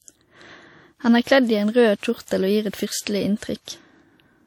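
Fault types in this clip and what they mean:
WMA compression: The speech sounds ringing and washy throughout, with a hiss that swells and fades along with the voice, and nothing is left above 19.2 kHz. This is likely Windows Media Audio coding at a low rate, roughly what a 48 kbps WMA 1 stream gives. Its long transform blocks spread quantisation noise over tens of milliseconds around each sound, and weaker spectral detail is thrown away, leaving the plainly audible damage.
Pre-echo: Between about 3.39 and 3.42 s, a short burst of hiss arrives just ahead of a sharp onset, and the attack itself sounds softened and smeared rather than crisp. The coder spreads its noise evenly across a whole block. Here the sudden loud moment sits late in its block, so noise sized for that peak also fills the quiet stretch before it, smearing about 37 ms ahead of the real attack.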